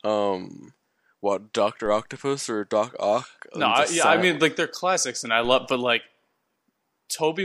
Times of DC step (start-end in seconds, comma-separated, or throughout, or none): 1.86, 5.45